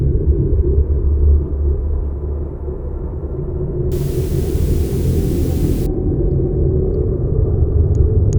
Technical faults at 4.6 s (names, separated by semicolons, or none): low bit depth with dither